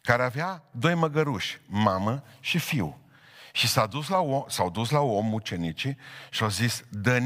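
The level falls by about 6 dB from 0.32 to 0.73 s and again from 3.93 to 4.15 s, then returns abruptly each time. This points to one channel drops out, where one side of a stereo pair likely cut off for a moment. With both sides carrying the same speech, folding to mono leaves half the signal, so the speech keeps its tone but sounds suddenly quieter during each of these two short dips.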